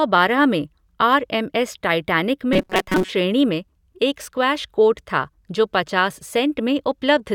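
From 2.53 to 3.11 s, after "आर एम एस टाइटैनिक", the speech becomes a rigid metallic buzz at 188 Hz. This is robotic sound from repeated short buffers. A roughly 5 ms chunk was likely looped, replacing most real audio. Normal sound returns at "में एक स्क्वैश कोर्ट".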